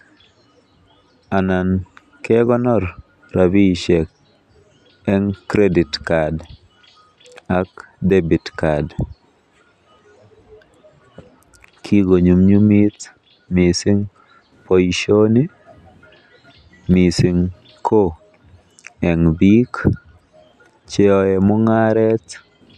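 Nothing goes wrong anywhere in this speech recording, so there's no fault to point to at any moment.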